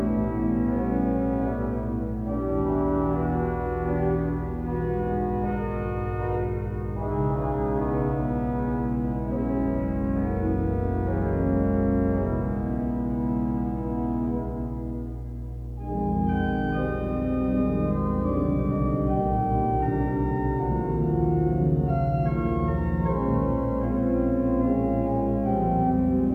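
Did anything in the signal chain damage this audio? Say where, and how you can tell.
Yes. A ground loop or nearby transformer in the analogue wiring couples the power line in, leaving a steady 60 Hz mains hum roughly 10 dB below the signal throughout.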